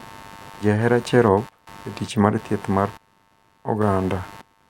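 Running under the speech the whole way through, there's computer activity noise: a buzzy, scratchy pulsing at around a hundred pulses a second, sitting roughly 25 dB down. It's the machine's changing load shaking the shared audio ground, so it follows the computer, not the talking.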